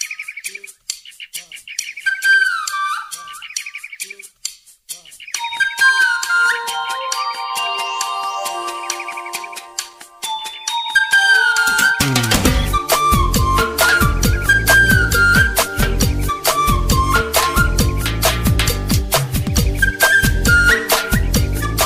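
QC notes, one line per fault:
No faults heard anywhere in the clip.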